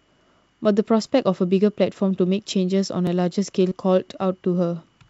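A speech recording carries two overlapping-chunks joins, at 1.06 s and 3.07 s, where about 7 ms of audio repeats because each 2-second chunk starts before the previous one ends; the waveform shows a duplicated cycle fragment with a click, and the spectrogram a thin vertical line. At 3.69 to 3.73 s, short concealed packet loss appears: roughly 20 ms never arrived and was filled by extending the preceding sound, seen as a smooth, overly regular stretch before blending back. Energy stops at 8 kHz in the spectrogram, consistent with a G.722 call path.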